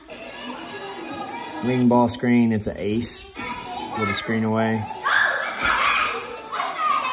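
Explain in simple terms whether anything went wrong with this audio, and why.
Nothing went wrong: the signal holds together steadily, with no breaks, glitches or damage anywhere along it.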